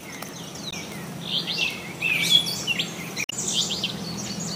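At 0.69–0.74 s and 3.23–3.33 s, damaged data in a compressed stream makes the decoder misread frames and resync.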